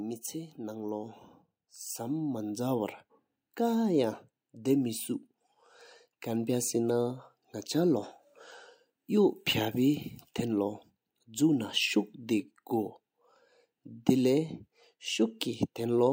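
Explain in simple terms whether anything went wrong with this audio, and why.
Something did go wrong: automatic gain rising. From 0.56 s to 7.28 s the speech and the background noise behind it get steadily louder together. The recorder's automatic level control judged the input too quiet and kept turning itself up over those seven seconds.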